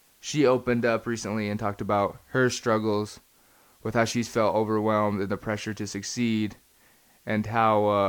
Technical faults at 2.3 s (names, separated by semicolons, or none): low bit depth with dither